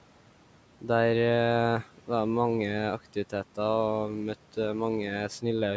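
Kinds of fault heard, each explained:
filter restarted on every block: a steady buzz near 375 Hz tracking the speech level, from 3.60 to 5.32 s, as the filter resets each block, which fits a 128-sample block.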